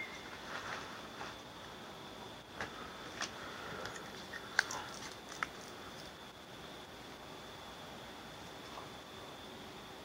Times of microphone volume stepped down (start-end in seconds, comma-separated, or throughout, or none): none